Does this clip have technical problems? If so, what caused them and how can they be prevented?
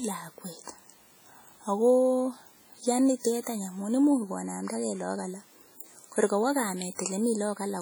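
Yes. Throughout the speech there is heavy ringing and a washy smear, with hiss that swells and fades with the signal. The likely cause is WMA compression. Its long transform blocks spread quantisation noise over tens of milliseconds. The damage fits a low bitrate near 32 kbps. Prevent it by encoding at a higher bitrate or keeping a lossless copy.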